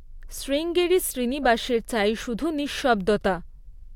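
Nothing in the speech stood out as a technical fault on listening.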